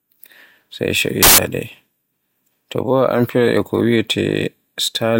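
From 1.23 to 1.38 s, the speech becomes loud, harsh broadband noise: samples built from the wrong bytes. Misassembled bytes turn the fast-changing low bits into each value's large part.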